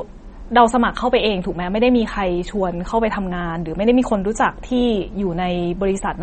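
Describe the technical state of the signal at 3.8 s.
At 3.8 s the speech carries the same damage heard across the whole clip, consistent with MP3 compression, likely at a low bitrate near 32 kbps. Nothing is present above about 8.4 kHz, where the encoder has cut the treble to save bits. Weak frequency lines drop in and out between frames, giving the speech a plainly audible watery, swirling texture, with metallic chirps on s sounds and softened, smeared onsets.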